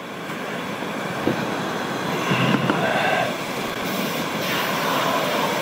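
A worn or dirty contact in the signal path starts making and breaking repeatedly from 3.47 s to 3.82 s, a loose connector crackle. Each time the contact opens, the signal is briefly chopped off, and any DC sitting on the line jumps as the connection reconnects, adding pops. For roughly a third of a second the audio is broken up by an irregular, scratchy burst of crackle laid over and through the sound.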